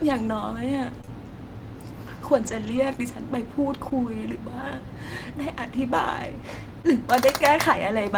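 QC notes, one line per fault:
1.01 to 3.92 s, scattered short gaps: a handful of packets, about three, went missing or arrived late, each no longer than roughly 20 ms, 60 ms lost in all. The receiver bridged each hole by extending the preceding sound. The speech stays clear apart from brief ticks and smears.
6.82 to 6.95 s, short concealed packet loss: 20 ms of the stream failed to reach the decoder in time. The receiver patched it by carrying the last sound forward and blending back, leaving a momentary smear or wobble in the speech.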